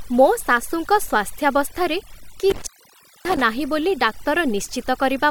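A noise reduction stage set far too aggressively runs through the whole speech clip, an overdone noise removal that pulls any frequency band near its noise estimate down or out entirely, taking the quieter parts of the voice along. The background collapses to near silence dotted with twinkling specks. Between 2.50 and 3.42 s an intermittent contact, a loose cable or plug, opens the line for about 584 ms. The sound drops out with crackle at both edges, leaving faint hiss during the gap.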